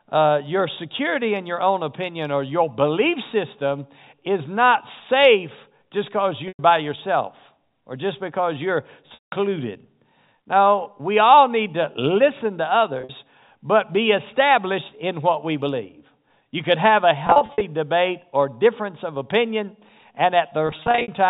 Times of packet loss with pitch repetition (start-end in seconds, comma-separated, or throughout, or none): 6.48-6.59, 9.14-9.32, 13.01-13.09, 17.27-17.61, 20.67-21.08